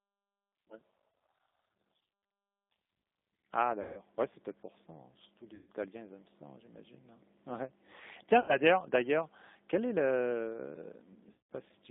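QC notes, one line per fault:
Throughout: G.729 codec. The speech passes through an 8 kbit/s G.729A path, band-limited to roughly 200 Hz to 3.7 kHz, so there is no air or sibilant detail above that. The codec rebuilds each frame from a vocal tract filter, a pitch predictor and a handful of pulses instead of the actual waveform, which makes the speech plainly rough and slightly synthetic. The damage is clearly audible but does not obscure meaning.
1.1 s, 3.82–4.01 s, 5.55–5.69 s, 8.40–8.57 s, 11.32–11.46 s: VoIP packet loss concealed by the speech codec. The lost stretches are about 30 ms, 150 ms, 120 ms, 90 ms and 180 ms. In each gap the decoder repeats its last pitch and filter state at falling gain, so the speech smears into a buzzy tone or coloured noise that fades. Because each frame depends on the previous one, the speech stays thin or distorted briefly after each gap.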